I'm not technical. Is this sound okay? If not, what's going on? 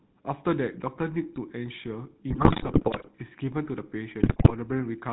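No. The whole recording has a buzzy, gravelly roughness and sounds muffled, because it went through the GSM full-rate codec, an early mobile-phone system. It rebuilds the voice from a simplified model and throws away everything above 4 kHz, so the clarity and crispness are lost.

There are also GSM bit errors. Around 2.29 to 3.09 s and again from 4.20 to 4.52 s, the voice breaks into squawks, pops and gargling. A weak phone connection corrupted some of the transmitted data, so the decoder briefly distorted the voice and its loudness.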